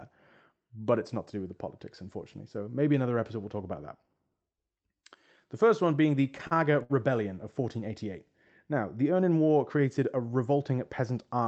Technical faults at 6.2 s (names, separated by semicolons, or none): repeated stalls (stutter)